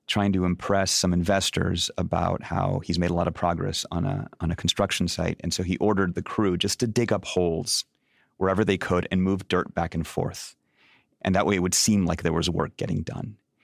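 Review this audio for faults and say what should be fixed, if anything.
Nothing needs fixing: the signal shows no technical faults anywhere in the recording.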